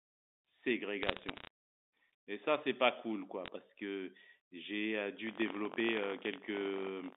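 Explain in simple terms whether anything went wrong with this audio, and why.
Bit errors on a digital phone line cause the scattered sharp ticks from 1.03 to 1.47 s and again briefly at 3.46 to 3.48 s. They are separate clicks laid over unchanged speech, not a steady buzz.

Buffer tearing starts at 5.25 s and lasts to the end. It is a continuous robotic rattle at about 47 per second, which fits a 1024-sample buffer, while slivers of speech from about a tenth of a second earlier repeat.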